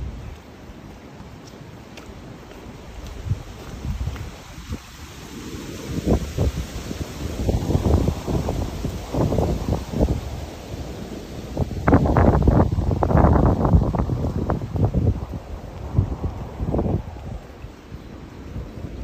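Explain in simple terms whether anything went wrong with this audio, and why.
Nothing went wrong; no faults can be heard here.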